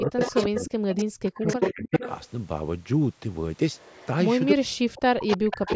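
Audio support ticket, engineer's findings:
Speech suppressed in double talk at 0.0–0.73 s, 1.05–2.03 s, 4.54–5.69 s: sound dips about 40 dB or cuts out in pieces, likely echo canceller ducking both talkers during overlap. Gaps track the overlap, unlike random dropouts.

Echo leak at 0.0–2.11 s, 3.74–4.06 s, 4.95–5.75 s: copy delayed 310 ms, nearly as loud as the original, faint at 3.74 s. Likely residual loudspeaker echo passed by the canceller. The fixed delay distinguishes it from room reverb.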